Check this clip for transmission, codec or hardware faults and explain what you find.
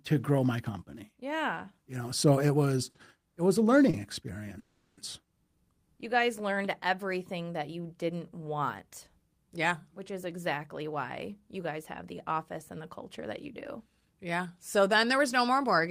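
The speech carries three kinds of network fault: two short stalls, one freeze, and two stretches of jitter buffer speed-up.

Short stall from a late packet: at 2.89 to 2.97 s, after "know so it was" and before "it was a", a sound is held for about 50 ms with a faint buzz or dip. It happens again at 3.90 to 3.96 s, after "was it was a", held about 30 ms. Each time a packet arrived late, the jitter buffer ran empty, and the receiver stretched the last sound before resuming where it left off.

Call audio freeze: from 4.59 to 5.00 s the sound hangs as a fading buzz or hiss lasting about 380 ms, never dropping to silence, then carries on without losing anything. This is likely held-up packets draining the jitter buffer, with the receiver filling the wait.

Jitter buffer speed-up: from 10.38 to 12.32 s and again from 13.22 to 15.88 s, the speech sounds hurried, running at 106% speed with unchanged pitch. 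A backlog of audio built up in the buffer, so the receiver trimmed many tiny pitch-period slices, roughly a tenth and then a fifth of a second in total.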